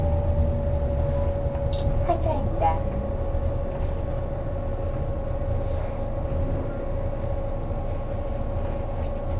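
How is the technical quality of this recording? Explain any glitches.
No glitches can be heard in this recording. The sound has been through a call path that stops at 4 kHz, giving it the narrow, telephone-like bandwidth of a classic phone line codec such as G.711.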